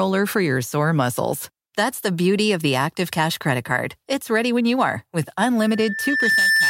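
A speech clip with loudspeaker feedback squeal near its end. Just after "when you are with", at 5.62 s, a steady tone near 1.8 kHz appears. It swells for under a second, ending about 5 dB above the speech, and lasts until 6.69 s. The microphone is hearing its own loudspeaker, and the loop gain at that frequency exceeds one.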